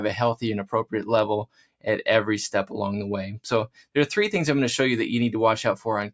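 A noise suppressor meant for speech stays on across the whole clip, which comes through a call's microphone path with nothing above 8 kHz. The suppressor treats held parts of the sound as noise. Their level keeps shifting by roughly 5 dB, so sustained tones pump and thin while attacks pass through. There are also two stretches where sound is cut by the noise suppressor. From 1.46 to 1.86 s and again from 3.68 to 3.96 s, the level falls by up to about 18 dB.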